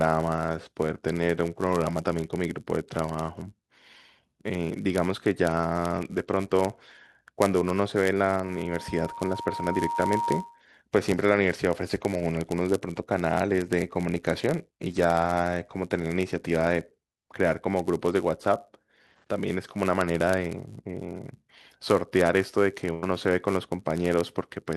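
From start to end, a steady buzz sits under the speech at 99.6 Hz. This is a block size mismatch (padded). One stage writes blocks slightly shorter than the next stage reads. The remainder of each block is filled with zeros. That tiny gap repeats at the block rate, so it is heard as a buzz. The speech also runs a little slow, at 0.996 times normal speed. Its timbre stays.

At 8.41 s a loudspeaker feedback squeal begins. A single tone at 940 Hz swells up over roughly one and a half seconds. A microphone is picking up the loudspeaker it feeds. At this one frequency the loop gain exceeds one, so the tone keeps growing. It peaks at about the level of the speech. The howl ends at 10.63 s.

From 22.93 to 23.07 s comes a burst of packet loss. The receiver lacked audio for this stretch. It held the last sound for about 86 ms and let it fade, so a brief sustained, dying tail replaces the speech. 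Then the audio picks up further on. About 80 ms of speech is simply missing.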